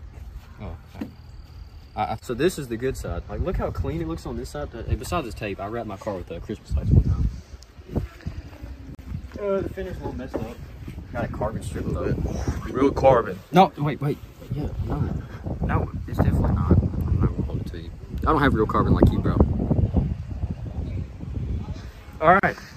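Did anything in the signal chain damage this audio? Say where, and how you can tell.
Yes. At the codec stage there's a gap at a join of encoded pieces: a gap of about 40 ms at 8.95 s and 37 ms at 22.40 s. The edges are smeared and the sound resumes where it stopped, because separately encoded chunks were joined with their encoder delay and padding left in.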